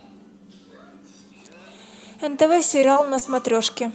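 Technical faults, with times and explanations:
2.45–3.23 s, repeated packet loss (robotic sound): audio packets repeatedly failed to arrive in time, leaving five brief holes, the longest about 22 ms. Each was patched by stretching the preceding sound, so the speech turns choppy in this stretch.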